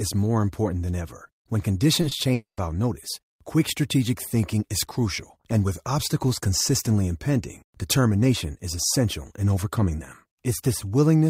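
Short concealed packet loss at 2.01–2.05 s and 2.09–2.13 s: each brief gap was patched by extending the preceding speech, leaving a quick smear. A long network dropout is the likely cause of the break at 2.33–2.59 s: the sound trails off as a fading buzz into near-silence, then resumes at "notice quick strategic thinking".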